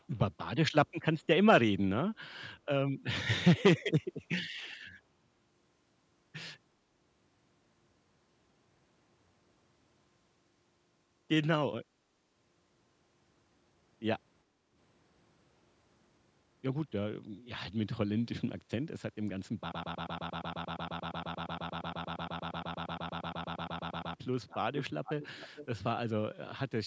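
From the very start to 0.19 s, a faint delayed copy of the speech sits about 35 dB under the voice, trailing it by roughly 0.39 s. It returns more clearly from 3.55 to 3.82 s, about 20 dB down and 0.41 s behind. This is likely an echo leak: a far end playing the call over a loudspeaker let part of it back into its microphone past an incomplete echo canceller, and that residue was sent back along the line.

At 14.45 to 14.72 s the room tone suddenly sinks by about 8 dB for roughly a third of a second, then comes back. This is background gated by the echo canceller. While playback was active, the canceller pulled the microphone gain down hard, taking the ambient sound with it until it released.

From 19.72 to 24.15 s a tiny fragment of about 116 ms stutters back to back for roughly four and a half seconds, an exact mechanical repetition close to nine times per second, and whatever should have played there is gone. 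That is a broken-record loop, with the likely cause being a stalled player, encoder or stream that kept resending its last buffered piece.

The echo leak recurs afterwards, delayed about 0.44 s each time. It is brief at 24.48 to 24.57 s, about 20 dB down, and longer and stronger from 25.04 to 25.81 s, at about 15 dB under the speech, where the trailing copy is easiest to hear.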